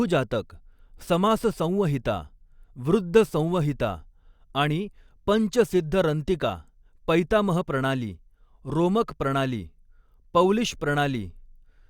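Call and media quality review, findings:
No audible faults found in this speech recording.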